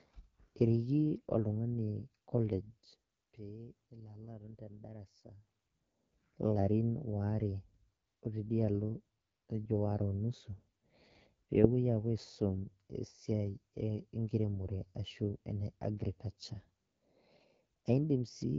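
From start to end, the speech carries AMR wideband (HD Voice) codec damage. Nothing sounds above 7.2 kHz. The voice is rough and raspy, which fits the low 8.85 kbit/s rate.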